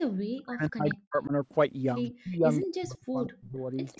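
From 0.06 to 1.32 s the speech level repeatedly collapses, falling by about 40 dB at its deepest, with roughly a second of the span affected. This is speech suppressed in double talk. The likely cause is both ends talking at once, so the echo canceller could not tell the near talker from loudspeaker echo and attenuated everything. Within that stretch, at 0.89 to 0.94 s, a brief echo leak appears: a copy of the voice delayed by 185 ms, about 10 dB below the speech. It is likely residual echo that the loudspeaker side's canceller failed to remove from its microphone pickup and sent back. Further echo leak scraps follow at 2.03 to 2.10 s, very faint at about 30 dB down, and at 2.51 to 2.66 s, at about 20 dB down, each with the same 185 ms delay. Suppression returns from 2.18 to 2.47 s, with about 0.3 s of dropout, and again from 2.64 to 3.58 s, where about 0.7 s of the speech is pushed down by up to about 40 dB. 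A final faint echo fragment at about 30 dB down runs from 3.92 s to the end. The bandwidth stops at 8 kHz, as expected from call microphone processing.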